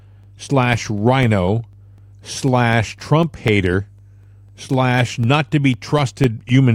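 Mains hum runs through the whole speech recording as a steady 50 Hz tone with low harmonics, sitting roughly 30 dB below the speech. A ground loop or nearby transformer is letting the power line leak into the signal path, so the hum stays constant whether anyone is talking or not. Periodic USB or driver dropouts appear from 0.23 s to 6.49 s as a regular tick every 0.25 s, about thirty in all. Each tick is a gap of around a couple of milliseconds where the audio drops to silence. The even spacing points to a background task blocking the USB bus or audio driver on a fixed schedule, so the interface misses a sliver of samples each time. The ticks are heard only while speech is present.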